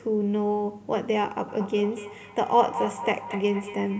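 From 1.49 s to the end, feedback echo between two devices repeats the speech roughly every fifth of a second, peaking about 8 dB below it, visible as stacked, smeared copies on the spectrogram.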